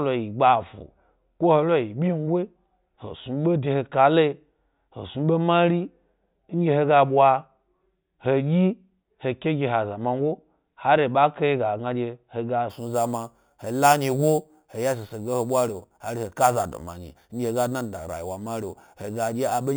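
From 12.70 s to the end at 19.76 s, imaging from sample-and-hold upsampling adds a bright metallic fizz that tracks the speech's loudness. Each sample was simply repeated without smoothing, which fits a jump from 8 kHz to 44.1 kHz. A spectrogram shows a mirrored band at 4 kHz to 8 kHz, about 16 dB below the signal, sloping opposite to pitch. The waveform looks stair-stepped.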